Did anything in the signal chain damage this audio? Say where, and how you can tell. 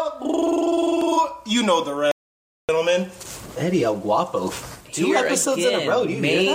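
Yes. At 2.11 s the sound cuts out abruptly into silence, with no room tone, and returns mid-flow at 2.69 s, so about 0.57 s is simply gone. This audio dropout to silence likely arose at the input or link stage, where the recorder kept writing silence.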